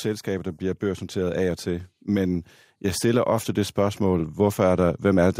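From 0.25 s to 5.34 s the automatic gain rising fault appears: the gain control judged the input too quiet and slowly raised it by about 9 dB, so speech and background swell together. The waveform envelope widens steadily, and the spectrogram brightens evenly across all frequencies.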